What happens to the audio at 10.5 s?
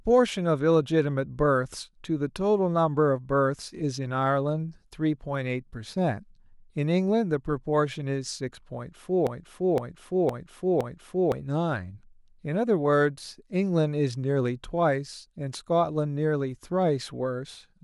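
A broken-record loop runs from 9.27 to 11.32 s, covering 10.5 s. A fragment of about 0.51 s repeats exactly four times back to back, likely because the player or stream stalled and kept resending its last buffered piece, so the speech meant for those two seconds is lost.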